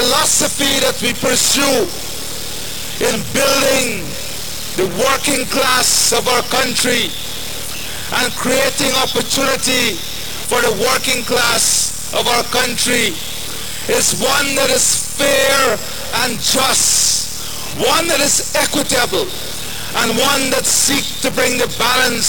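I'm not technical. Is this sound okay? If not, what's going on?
No. Two problems run through the whole clip.

The first is likely low bit depth without dither: the sound was probably cut down to very few levels, about 4 bits, and chopped rather than smoothed. That makes everything grainy and gritty, worst in the quiet parts, which crackle or drop out.

The second is a block size mismatch (padded). One part of the system hands over chunks that are too short, and the gaps are filled with silence. That causes a steady low buzz at about 38 Hz, which fits chunks of 1024 samples, and makes everything play roughly 11% slow with the same tone.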